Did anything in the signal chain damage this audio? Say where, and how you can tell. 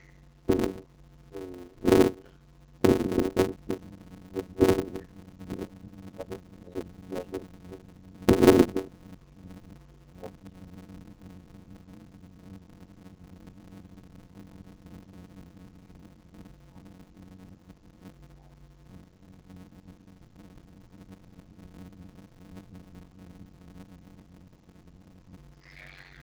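Yes. At the codec stage, the speech has passed through the AMR wideband (HD Voice) codec at its lowest rate, a heavy rough, raspy texture throughout that fits the 6.6 kbit/s mode. Nothing is present above 7 kHz. At this rate the pulse-driven vocal tract model has too few bits to describe the excitation accurately, so voiced sounds come out grainy and harsh. The top band, filled with shaped noise rather than coded detail, adds a hissy edge.

At the driver or buffer stage there is a block size mismatch (padded) that runs the whole clip. A steady buzz at 91.9 Hz sits under the speech, and everything plays at 0.533 times normal speed while keeping roughly its natural pitch. One stage writes short blocks, consistent with 256 samples, into larger blocks read by the next stage, which zero-fills the remainder. Those regular silent gaps produce the buzz and stretch the timing.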